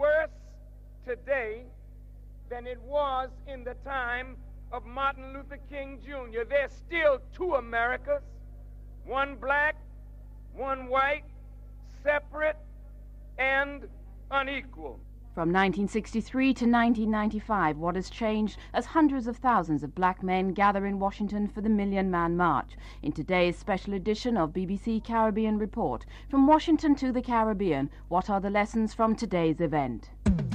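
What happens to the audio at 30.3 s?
Mains hum is present at 30.3 s and runs through the whole clip. A ground loop or nearby transformer is leaking the power line into the signal, giving a steady low 50 Hz tone with some low harmonics, roughly 20 dB below the sound.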